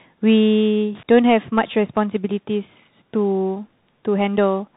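Throughout, the speech sounds boxed-in and scratchy, with grainy hiss beneath it and nothing above 3.8 kHz: a Bluetooth CVSD headset codec, whose one-bit up-down coding fits a 64 kbps stream. From 0.95 to 1.03 s a short burst of irregular crackle cuts in, the loose connector crackle of a contact briefly breaking and remaking.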